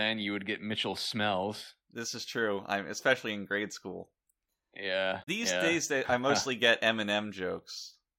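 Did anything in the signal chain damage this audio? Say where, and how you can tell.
Yes. The damage sits at the codec stage, in the compressed data itself. From 5.20 to 5.28 s the speech breaks into a short glitch, about 90 ms long, just before "yeah days they I". That is damaged data in a compressed stream. Some bytes in the encoded frames were corrupted. The decoder misread those frames and lost sync. It then had to hunt for the next valid frame header before clean speech resumed.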